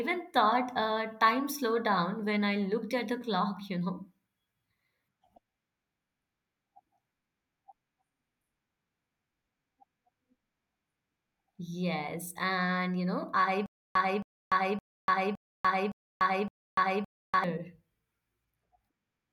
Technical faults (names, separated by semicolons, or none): stutter with silent gaps